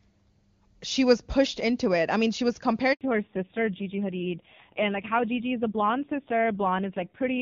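At 2.93 s the speech cuts out abruptly, fading within a few tens of milliseconds to silence that lasts about 80 ms, until 3.01 s. Whatever was said in that window is simply missing. This is a handover gap: the call was being passed from one network to another, and during the switch no speech frames reached the receiver. Rather than stretching or repeating audio, the decoder let the sound die away and waited for the new link.

From 3.01 s to the end, the speech sounds muffled and coarser. The fuller top end heard in the opening seconds, carried by wideband HD Voice at a high rate, disappears, with nothing above 4 kHz. A rough texture sits on the voice. This is a fallback to narrowband. After the handover the call dropped from AMR-WB to the older AMR-NB codec, and the added rasp points to one of its low bitrates, around 5.9 kbit/s.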